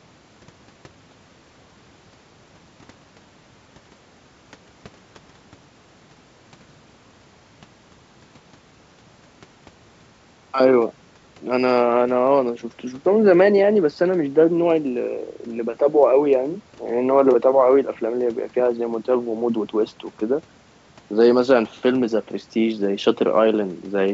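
No technical faults can be heard in this speech, which comes through a G.722 call path at 64 kbps with nothing above 8 kHz.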